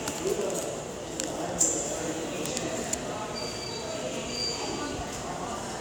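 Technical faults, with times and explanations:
No technical faults can be heard in this audio.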